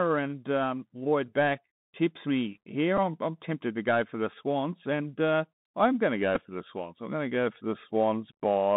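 Bluetooth CVSD headset codec runs through the whole clip. The speech is confined to roughly 150 Hz to 3.7 kHz, which fits a 64 kbps CVSD link. That codec sends one bit per sample, stepping the waveform up or down with an adaptive step size. Its damage is plainly audible. A granular hiss sits beneath the speech, s sounds come out scratchy, and loud high-frequency moments outrun the step size and break up.

Bluetooth headset packet repeated occurs at 2.97 s, between "back tips me here" and "I'm I'm tempted to", and again from 6.35 to 6.42 s, between "I'm going to go" and "for the". Each time, about 7.5 ms of audio failed to arrive, and the headset decoded the previous chunk again in its place. That fits two repeated packets. The result is brief rather than a sustained buzz.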